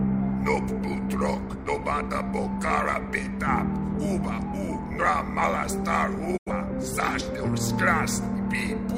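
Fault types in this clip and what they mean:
Digital broadcast dropout: the receiver stopped getting usable frames, which fits two corrupted or missing frames, and muted until clean data resumed. At 6.36 s the sound fades out over 20 ms and returns at 6.51 s, with about 85 ms of programme missing.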